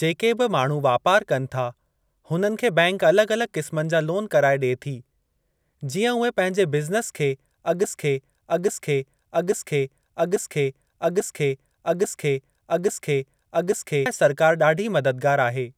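From 7.84 s to 14.06 s, one 0.84-second fragment of speech repeats exactly, back to back, seven times, and the speech that should follow is lost. This broken-record loop likely comes from a stalled player, encoder or stream resending its last buffered piece.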